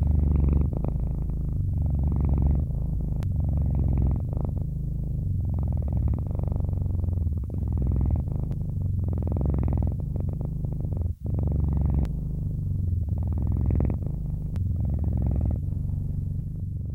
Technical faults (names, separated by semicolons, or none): damaged data in a compressed stream